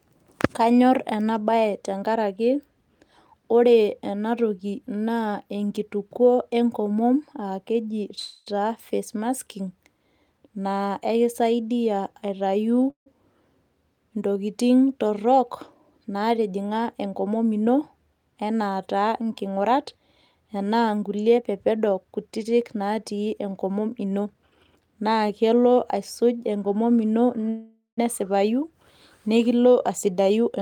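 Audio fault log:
8.19–8.48 s, 12.90–13.08 s, 27.49–27.99 s: call audio freeze. The speech stalls and the last sound is stretched into a fading buzz, with a short stretch of silence in the second and third. Nothing is lost, just delayed, likely from held-up packets draining the jitter buffer.
16.08–17.74 s, 21.37–24.35 s, 29.89–30.58 s: jitter buffer speed-up. The speech hurries at about 107%, 110% and 108% with the pitch unchanged, because tiny pitch-period slices are trimmed out, roughly 0.15 s, 0.3 s and 0.07 s in total, to work off the backlog.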